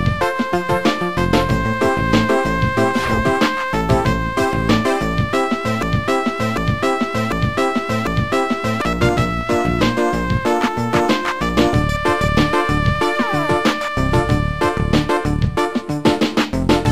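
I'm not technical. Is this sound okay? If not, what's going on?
No, there's a problem. From about 5.8 to 8.8 seconds the sound gets stuck in a broken-record loop: the same short piece, about three-quarters of a second long, plays four times in a row with no gap, like a skipping CD. The likely cause is the player or stream stalling and replaying the last bit it had. Whatever should have played during those three seconds is lost.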